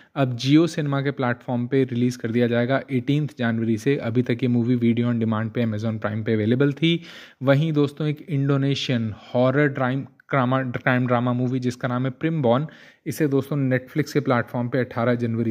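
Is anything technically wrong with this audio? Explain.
No, nothing technically wrong stood out on listening to this audio.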